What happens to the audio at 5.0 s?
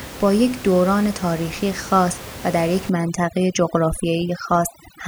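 At 5.0 s the background drops and breaks up into twinkling, warbling specks, with the room noise that sat about 15 dB below the speech pulled down. This is overdone noise removal, running from 2.89 s to the end of the clip. The reduction is set too hard, so every frequency band close to its noise estimate is pulled far down or cut, taking quiet parts of the voice with it.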